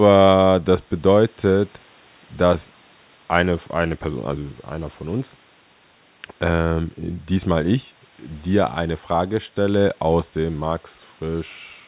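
No faults can be heard anywhere in this recording.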